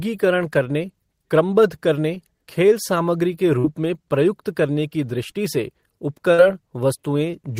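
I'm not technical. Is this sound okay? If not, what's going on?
No. The call lost parts of the audio on its way across the network, in two different ways.

Short concealed packet loss: at 2.14 to 2.17 s, between "करने क्रमबद्ध" and "खेल सामग्री के", and again at 6.34 to 6.39 s, small pieces of speech arrived too late. The receiver patched each hole by stretching the sound just before it, so you hear a brief smear or wobble.

Burst of packet loss: at 3.59 to 3.65 s, after "खेल सामग्री के" and before "में प्रयुक्त करने की", several pieces in a row went missing. The receiver held the last sound and let it fade into a short buzz or hiss, and about 50 ms of speech is simply gone.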